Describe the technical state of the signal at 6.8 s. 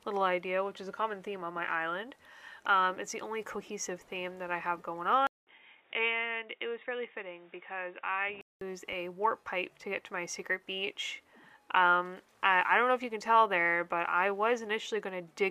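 At 6.8 s the sound is dull and boxy, with nothing above 3.8 kHz. It is a few dB quieter, with a faint new noise floor. This runs from 5.27 to 8.61 s, after a 200 ms silence. The likely cause is an input switched to a poorer device.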